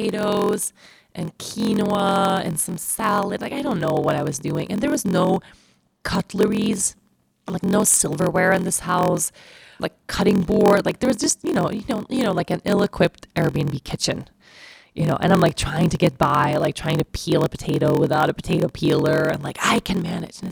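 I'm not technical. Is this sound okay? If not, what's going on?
No. All the way through, the speech has a low buzz, about 43 times a second, and runs slightly slow, at roughly 94% speed, though the voice's character stays the same. This is a block size mismatch (padded): each chunk of audio, apparently 1024 samples long, arrives slightly short, and the gap is filled with silence.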